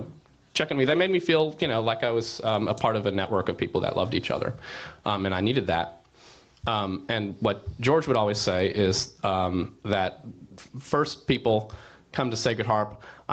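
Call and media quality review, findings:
Gain pumping, whole clip. Swing of about 10 dB. Likely cause: input gain set far too high, with a fast limiter clamping each peak. Dynamics squashed flat. Band ends at 8 kHz, consistent with wideband Opus near 20 kbps.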